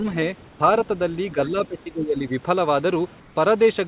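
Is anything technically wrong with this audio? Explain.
Yes, two kinds of fault. At 0.48 to 0.60 s and again at 3.20 to 3.36 s there's comfort noise in place of the background: the room's texture turns into flat, featureless hiss, about 2 to 3 dB quieter. That's likely discontinuous transmission, with the receiver filling the pause with synthetic noise.

Between 1.34 and 2.32 s there's speech suppressed in double talk. The speech drops in patches, by roughly 15 dB at worst, likely because the echo canceller ducked everything while the far end talked over it.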